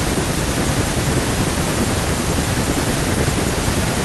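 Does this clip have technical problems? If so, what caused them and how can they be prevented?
No, nothing in this speech recording stands out as a technical problem, so there's nothing here that needs preventing.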